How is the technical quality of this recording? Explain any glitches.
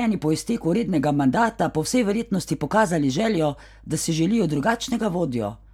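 No technical glitches can be heard anywhere in the recording; the speech signal stays continuous and intact throughout.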